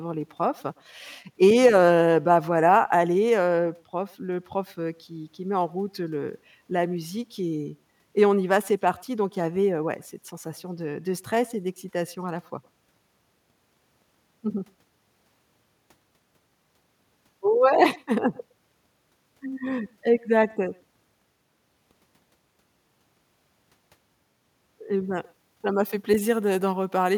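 A speech recording with two faults. Throughout, an echo with no canceller shadows the talker. A faint, thin copy arrives around a tenth of a second late, about 27 dB down. The far end's loudspeaker feeds its microphone, and nothing subtracts that leakage. From 25.05 s to the end at 27.17 s, pre-emphasis is left on. The treble sits about 11 dB high at 10 kHz relative to 1 kHz. The sound turns bright, thin and sibilant. The boost matches a 50 µs FM curve, whose opposite cut was never applied.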